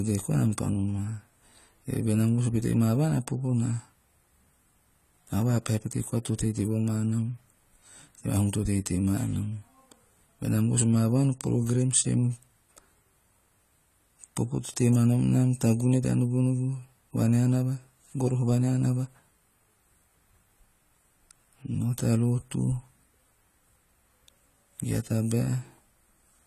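Throughout the speech, the likely cause is AAC compression at a low bitrate: the encoder is short of bits, so it drops detail it judges inaudible and band-limits the signal, consistent with AAC-LC at around 32 kbps. Nothing reaches above 14 kHz, so the top of the spectrum is simply absent, and the codec damage is plainly audible: the voice sounds dull and smeared, with a swirling, fizzy texture on sibilants and held vowels.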